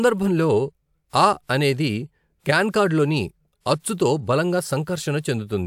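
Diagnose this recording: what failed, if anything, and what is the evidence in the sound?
Nothing failed: no stage from capture through to playback leaves an audible fault anywhere in the speech.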